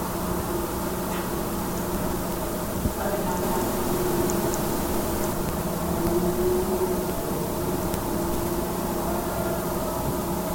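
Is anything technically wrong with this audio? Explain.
Yes. From 3.43 to 5.33 s there is a doubled audio track. The sounds repeat about a fifth of a second later at roughly equal loudness. The likely cause is a second, slower capture path mixed in. Unlike an echo, the copy is full-band and has no decay or room colour, and it switches on and off abruptly.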